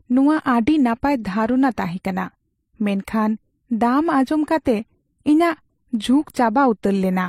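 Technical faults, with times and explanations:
Throughout, transcoding between lossy codecs: the speech has nothing above 16.3 kHz and carries two different kinds of coding damage at once, heard together. The likely cause is a chain of lossy encodes, consistent with a low-rate MP3 around 43 kbit/s followed by HE-AAC around 32 kbit/s. The second encoder wastes its small bit budget reproducing the first one's artefacts while adding its own, so the damage piles up, and the lowest band limit in the chain remains.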